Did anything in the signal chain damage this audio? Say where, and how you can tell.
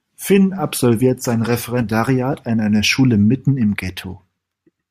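Yes. Right after "absolviert sein", from 1.83 to 1.91 s, the level dips abruptly by about 6 dB and then recovers before "an einer". That's the signature of one channel dropping out ahead of the mono sum, likely a brief break in one leg of the stereo wiring or link.

The second fault is at 2.33 s, just before "an einer": a short grainy smear where the sound briefly loses its shape. That's a lost LE Audio frame. The LC3 decoder reused the previous spectrum with scrambled signs, and a gap this short fits a single missing 10 ms frame on the Bluetooth link.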